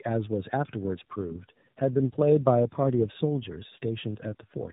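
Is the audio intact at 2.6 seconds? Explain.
No. At 2.6 s, as across the whole clip, the speech shows tandem speech coding: it sounds like two speech codecs in a row, likely iLBC then AMR-NB, the second recoding the first's damage. It sounds rough, muffled and warbly. A spectrogram shows nothing above 3.8 kHz and smeared formants.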